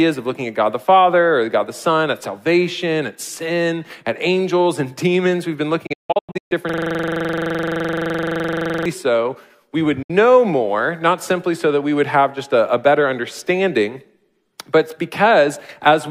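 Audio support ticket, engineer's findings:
Digital broadcast dropout, 5.86–6.52 s and 10.02–10.10 s: receiver muting on bad frames, 8 ms fades. Waveform shows flat gaps, longest 160 ms, then a single 64 ms hole.

System hang loop, 6.69–8.86 s: driver freeze, ring buffer replaying one 42.67 ms block about 51 times (fits a 2048-sample buffer). Buzz at 23.4 Hz; spectrogram shows identical repeating vertical stripes.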